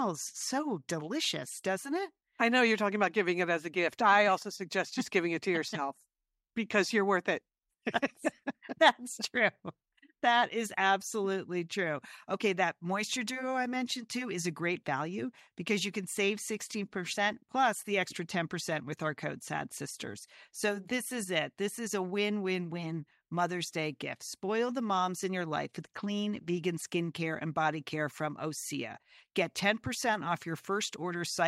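Nothing in this speech recording stands out as a technical fault, so there's nothing to flag anywhere along its timeline.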